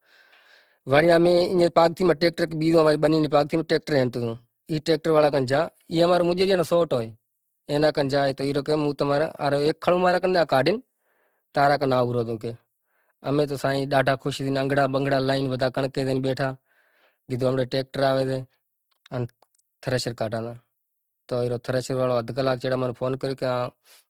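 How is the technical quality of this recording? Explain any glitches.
The recording carries plainly audible codec damage from start to finish. Opus compression runs throughout: the speech sounds grainy and rough, with noisy texture where bands were filled in rather than coded exactly, a likely result of a low-rate Opus music-mode encode, which fits roughly 16 kbps, while the bandwidth stays full, reaching about 20.2 kHz.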